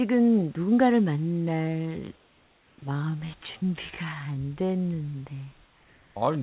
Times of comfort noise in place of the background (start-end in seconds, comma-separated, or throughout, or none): 2.16-2.78, 5.66-6.16